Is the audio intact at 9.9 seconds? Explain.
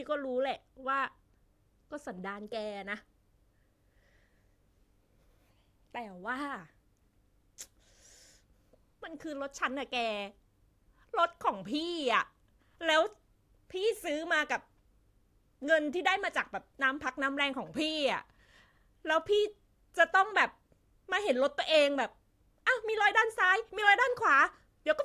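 Yes, the speech at 9.9 seconds is intact, with no fault at that moment.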